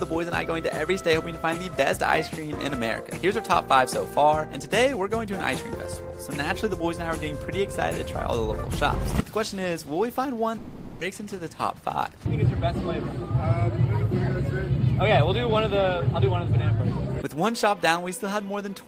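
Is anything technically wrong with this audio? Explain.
Yes, there are two faults, one right after the other.

From 10.57 to 11.02 s there is what sounds like a long network dropout, likely caused by packets failing to arrive for a stretch. The receiver had nothing to play, so it extended the last sound for about 440 ms. This is heard as a buzz or hiss continuing the last sound that fades but never falls fully silent. When the audio resumes, about 300 ms of the original is gone, so the sound jumps ahead.

From 11.10 to 12.08 s comes a jitter buffer speed-up. The late audio seems to have arrived in a burst, leaving the buffer holding more delay than it wants. To work that off, the receiver repeatedly cut tiny pitch-period-length slices, removing around a tenth of a second in total. Playback runs at about 112% speed with the pitch unchanged, so this second sounds hurried.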